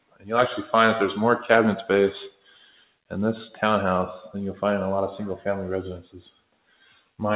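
A noise suppressor applied to music or sounds runs through the whole clip. Tuned for speech, it treats sustained tones, ambience and decays as noise and pulls them down, so the level swings by roughly 10 dB and the sound pumps and thins while onsets survive.

Sound cut by the noise suppressor is heard from 0.0 to 0.3 s, from 2.32 to 3.11 s and from 6.31 to 7.14 s. In each span the suppressor judged the held or fading material to be noise and attenuated it hardest, dropping it by about 18 dB, 18 dB and 17 dB respectively. The tails sink abruptly beneath the surrounding level. All of this sits on a call-codec band that stops at 4 kHz, which fits G.711 mu-law at 64 kbps.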